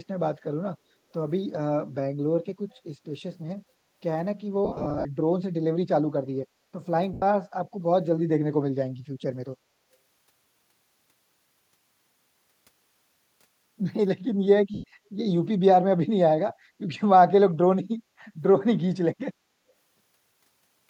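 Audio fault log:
2.73–2.79 s, echo leak: a faint delayed copy of the speech slips in for a brief scrap, sitting about 40 dB under the live voice and trailing it by roughly 293 ms. That spacing and how quiet it is suggest the far end is on a loudspeaker and its echo canceller likely let a sliver of the pickup through, so the returned copy comes back barely noticeable under everything else.
4.65–5.05 s, 7.13–7.22 s, 14.74–14.84 s, lost LE Audio frames: in the first stretch about 240 ms goes missing in pieces spread over 400 ms, the longest gap around 50 ms, then single dropouts of 90 ms and 100 ms. Each time the Bluetooth decoder fills the gap by replaying the last spectrum with scrambled phase, so the speech smears into a noisy hiss that fades down as the loss runs on. The light codec compression on the rest of the path is slight, at most a faint watery texture on noise and attacks.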